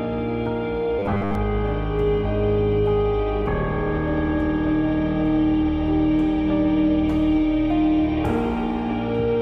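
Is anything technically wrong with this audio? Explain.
Yes. From 0.99 to 1.35 s there is robotic sound from repeated short buffers. The sound becomes a rigid, metallic buzz at 100 Hz. The likely cause is audio arriving too seldom, so roughly 10 ms chunks get repeated, replacing most of the real material.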